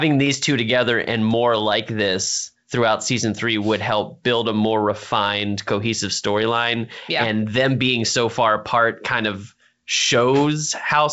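Nothing stood out on listening to this speech, which comes through G.722 wideband telephone coding at 64 kbit/s with its band ending near 7.7 kHz.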